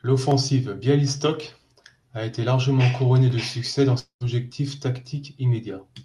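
From 3.99 to 4.23 s speech smears into fading buzz, then silence, then resumes further on: likely a long network dropout, outlasting brief packet-loss concealment.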